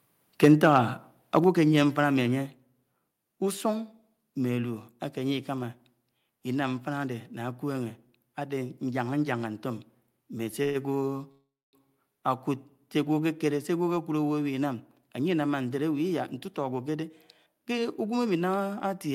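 Harsh, crackling edges on the loudest syllables from 0.43 to 0.78 s, 1.34 to 1.38 s and 1.78 to 1.81 s are microphone overload: peaks up to about 7 dB over full scale are likely being flattened at the converter's limit. Interleaved with these, the whole level drops abruptly at 0.45 s (about 3 dB), 1.44 s (about 6 dB) and 2.46 s (about 3 dB). These are microphone volume stepped down, likely the call software cutting the input gain after clipping.

At 10.63 to 10.77 s the sound stretches into a fading buzz for 113 ms, and at 11.31 to 11.75 s a longer 415 ms hold decays into about 250 ms of silence. Each is a call audio freeze: packets likely stalled, the jitter buffer ran dry, and playback resumed where it stopped.

From 16.11 to 18.13 s the speech sounds hurried but keeps its pitch, running at about 107% speed. This is jitter buffer speed-up, with around 150 ms of pitch periods trimmed out to shrink the excess delay.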